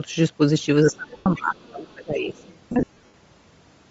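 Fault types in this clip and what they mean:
Bluetooth LC3 compression: The speech has a plainly audible grainy, breathy edge throughout, likely from LC3 coding at a low rate, consistent with about 32 kbps and 10 ms frames. The codec drops much of the upper spectrum and fills the gaps with noise. On a spectrogram the high band looks speckled and noise-like, without the sharp harmonic detail of the lower band. The waveform shows no distinct clipping or dropouts from this alone.
Speech suppressed in double talk: From 0.83 to 2.44 s the talker's level sinks, likely because an echo canceller faced both sides talking at once and turned its own talker down along with the echo. The deepest dip reaches about 25 dB, and about 1.5 s is affected in total. The waveform envelope shows a clear sag across this span. On a spectrogram the speech energy thins and upper harmonics fade in patches before recovering.
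Lost LE Audio frames: At 1.17 to 1.26 s about 90 ms is lost in one run. From 2.72 to 3.14 s about 270 ms is lost across a 420 ms stretch, in bursts up to roughly 70 ms long. The decoder repeats the last spectrum with scrambled phase and fades it out, so the sound smears into noisy hiss. On a spectrogram these spans show harmonics dissolving into flat noise bands. The waveform decays toward silence in the longer gaps.
Other side's voice leaking through: Faint scraps of a second voice sit about 35 dB below the main speech at 1.57 to 1.67 s, 1.88 to 1.94 s and 2.34 to 2.59 s, likely loudspeaker echo that the echo canceller left in the microphone signal. A spectrogram shows weak, separate harmonic traces under the main speech in these windows. The waveform barely changes because their level is so low.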